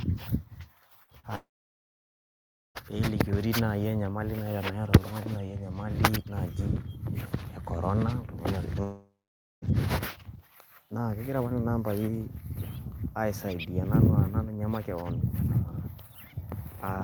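Speech, with two short concealed packet losses close together at 1.03 to 1.10 s and 1.19 to 1.26 s. Each time about 40 ms of audio failed to arrive and the receiver papered over it by extending the preceding sound, so what you hear is a quick smear or wobble rather than a gap. Two longer interruptions are likely long network dropouts, at 1.35 to 2.78 s and 8.83 to 9.65 s. Unlike the brief patches, the concealment here runs out: a fading continuation of the last sound gives way to about 1.3 s and then about 0.5 s of silence, and the speech resumes further along with the missing stretch simply gone.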